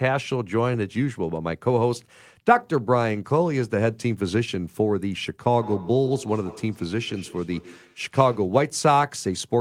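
A speech recording with feedback echo between two devices from 5.53 s to 8.52 s: the speech returns roughly every 150 ms, peaking about 17 dB below the direct speech, as a second device's loudspeaker feeds the microphone and escapes the echo canceller of the microphone's own device.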